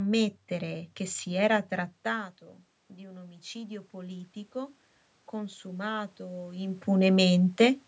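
After the talker draws back around 2 s, automatic gain rising lifts voice and room noise together from 2.97 to 4.83 s, recovering only about 5 dB of the roughly 16 dB lost.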